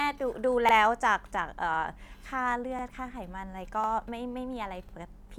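At 0.69, 1.74, 2.79, 3.84 and 4.89 s the speech shows overlapping chunks: the stream was split into 1-second blocks, and each new block begins 50 ms before the previous one finished, so that stretch of audio plays twice at every join. Each repeat lasts from its start time to 50 ms later, ending at 0.74, 1.79, 2.84, 3.89 and 4.94 s. The result is a brief stutter or click recurring once per second.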